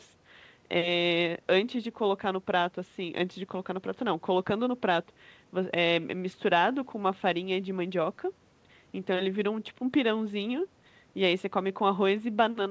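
No faults are audible in this speech; the call path cuts everything above 8 kHz, as expected from a wideband codec such as G.722.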